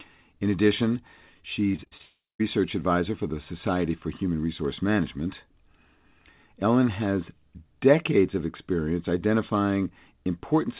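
From 1.72 to 2.02 s, repeated packet loss leaves five short holes in the stream, the longest 38 ms and about 120 ms in total. Each is patched by extending the previous sound, so roughly two-fifths of this stretch is concealment, and the speech turns choppy and robotic.

Right after, from 2.02 to 2.41 s, a long network dropout likely stops audio arriving for about 380 ms. The concealment buzzes on, then fades into about 180 ms of silence before the speech resumes with that part missing. Throughout, nothing reaches above 4 kHz, which fits a narrowband G.711 call.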